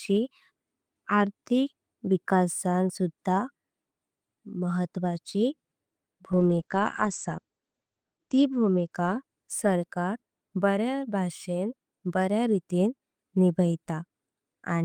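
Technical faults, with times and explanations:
6.32–10.29 s, call bitrate drop: the speech turns coarse and muffled, with nothing above 8 kHz. The encoder had fewer bits, which fits a fall from 32 to 11 kbps.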